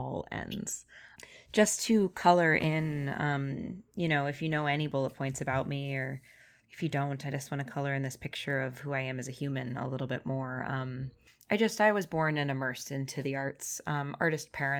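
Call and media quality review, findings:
No faults found in this speech recording. No working path is listed beyond the recording itself, so nothing further to note.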